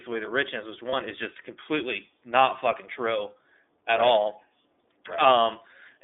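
Throughout, the speech passes through the iLBC codec. The band stops near 3.6 kHz and nothing below about 250 Hz comes through, giving a narrowband telephone tone. Plainly audible coding roughness and a synthetic edge, consistent with 13.33 kbps iLBC, set it apart from simple band-limiting.

From 0.90 to 0.94 s, between "away the richness which" and "is just completely not", lost iLBC frames leave a brief held, slightly buzzy vowel where the decoder repeats the last pitch cycle. The gap fits one lost 30 ms frame. Unlike a dropout or mute, it is filled rather than silent, and the voice recovers immediately afterward.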